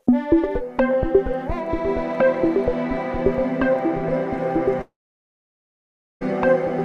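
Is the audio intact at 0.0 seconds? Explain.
Yes, the audio is intact at 0.0 seconds.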